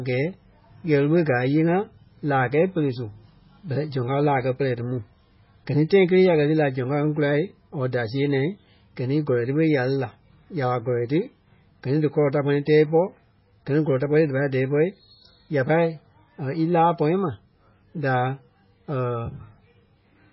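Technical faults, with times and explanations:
Throughout, MP3 compression: the speech sounds dull, watery and swirly, with nothing above 5.5 kHz. The likely cause is a heavy MP3 encode, fitting a bitrate of about 16 kbps, which cut the treble and let weak frequency lines switch on and off between frames.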